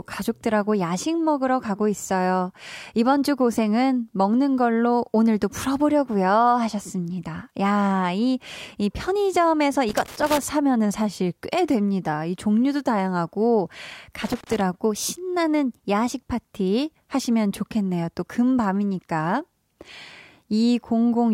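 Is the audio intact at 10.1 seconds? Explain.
No. From 9.88 to 10.39 s a loose connector crackle breaks in: a worn or dirty contact keeps making and breaking as it shifts, chopping the speech signal and letting stray DC on the line pop through, so the audio turns into an irregular, scratchy burst of crackle.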